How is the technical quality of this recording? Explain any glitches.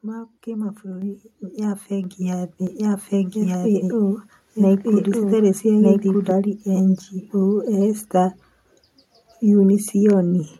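The recording has two kinds of glitch.

Microphone volume stepped up at 1.02, 2.04 and 3.06 s. The speech and background jump together, by about 5, 4 and 2 dB. Software raised the input gain in steps.

A doubled audio track runs from 2.67 to 6.31 s. A dry copy of the speech, about as loud, trails by roughly a second. It starts and stops abruptly. A second, slower capture path is the likely cause.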